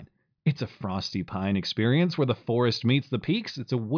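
Speech recording with no audible technical faults.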